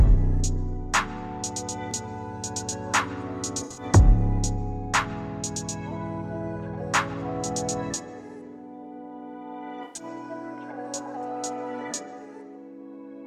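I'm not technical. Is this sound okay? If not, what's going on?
No. At 3.61 to 3.83 s and again at 9.83 to 10.03 s, about a fifth of a second of the sound was damaged and patched over. This is a corrupt frame concealed. A few small chunks of the compressed audio were damaged, so the player noticed and covered each gap itself, either silencing it or filling it with a scrambled echo of the sound just before.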